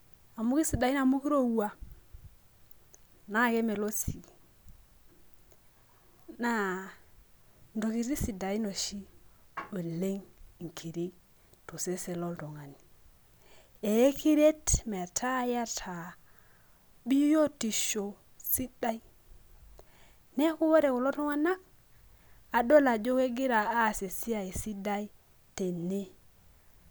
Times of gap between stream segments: none

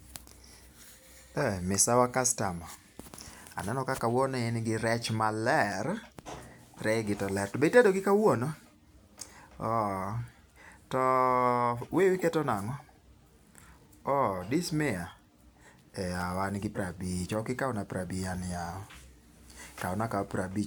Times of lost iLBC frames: none

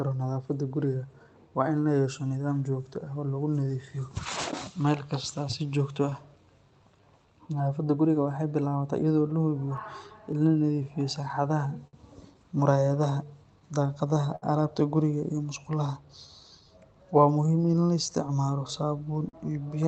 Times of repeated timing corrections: 0.69-19.06

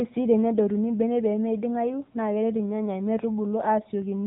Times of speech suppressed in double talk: none

